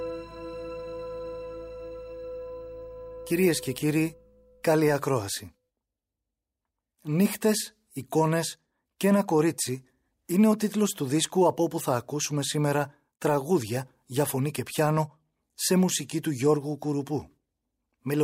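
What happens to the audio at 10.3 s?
Nothing goes wrong at 10.3 s: the audio plays through that moment intact, with no dropout, click, glitch or other fault.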